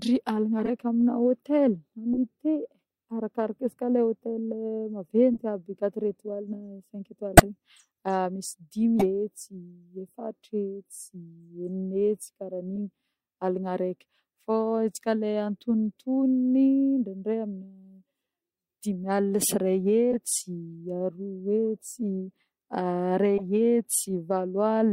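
Short chirps and bursts of noise break into the speech at 0.59, 2.13, 5.34, 7.37, 9.0, 12.76, 20.12 and 23.38 s. The one at 7.37 s is loudest. Each is a corrupt frame decoded: flipped bits in a few compressed frames were played anyway, throwing energy to the wrong frequencies.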